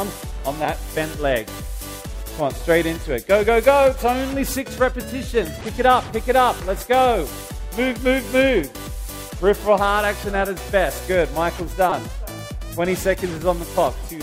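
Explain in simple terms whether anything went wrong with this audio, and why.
Around 11.90 to 11.92 seconds there is a brief, sharp blip, a tiny chirp or squeak of noise lasting only a few hundredths of a second, and it comes through loud. This is a corrupt frame decoded: the audio is stored in small compressed chunks, and a single chunk got scrambled. The player decoded it anyway, misreading its contents and placing sound at the wrong pitches for just that chunk's length, which produces the stray burst.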